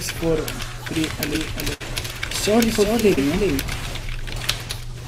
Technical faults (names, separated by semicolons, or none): doubled audio track; burst of packet loss; short concealed packet loss